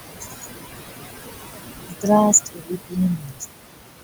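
A steady 60 Hz mains hum runs through the whole clip, roughly as loud as the speech itself. A ground loop or nearby transformer is feeding the power line into the signal, so there is a fixed low drone with a few low harmonics. Unlike room noise, which here sits about 8 dB under the speech and has a broad, shapeless texture, the hum is a single pitched tone that never changes in level or character.

Throughout, there is also overdone noise removal. The noise reduction was set far too strong for this recording. Whenever a frequency band comes near the tool's noise estimate, it pushes that band almost to nothing. The gaps between phrases fall close to silence, with small twinkling specks. The difference from ordinary suppressor action is how deep and sparse the cut is: quiet detail gets scooped out instead of just turned down.

Noise suppressor artifacts run through the clip as well, with the noise pulled down by about 20 dB. 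The suppressor makes a fresh decision in every frame, so the background sinks in the pauses and swells back up under the speech. It is heard as pumping and movement in the noise, where the overdone removal is heard as emptiness.

Speech cut by the noise suppressor happens four times: 0.2–0.47 s (down about 17 dB), 1.87–2.07 s (about 20 dB), 2.45–2.98 s (about 21 dB), and 3.16–3.44 s (about 21 dB). Each time, the suppressor took part of the speech for noise, so parts of the speech sound swallowed or faint. These are short, local dropouts inside the speech, not a change in the background.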